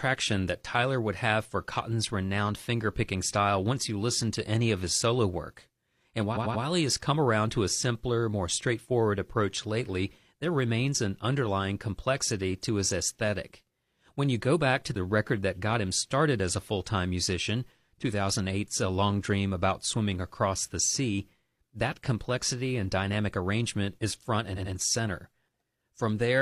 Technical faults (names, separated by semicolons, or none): repeated frames